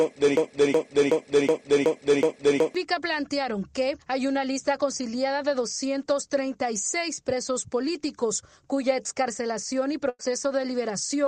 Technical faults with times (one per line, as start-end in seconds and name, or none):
0.37-2.75 broken-record loop
10.09-10.21 burst of packet loss